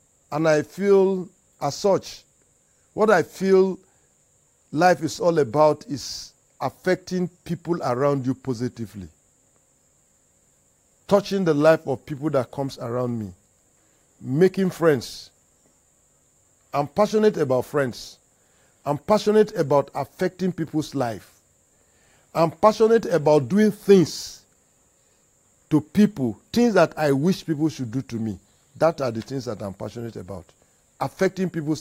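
Listening through the recording, nothing stood out as a technical problem at any point.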